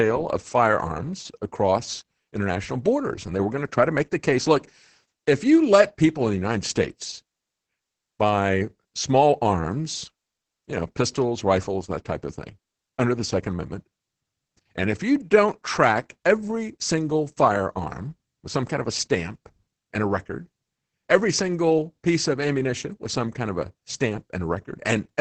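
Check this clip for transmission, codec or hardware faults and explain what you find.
One codec fault runs through the whole speech clip: Opus voice compression. Nothing is present above about 8.7 kHz, which fits SILK wideband mode at a low bitrate, around 10 kbps. The coarsely coded excitation makes the speech sound muffled, hoarse and slightly robotic.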